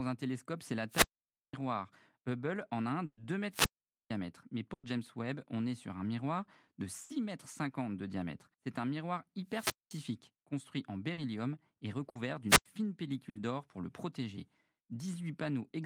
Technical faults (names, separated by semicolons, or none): wireless microphone squelch dropout; burst of packet loss; short concealed packet loss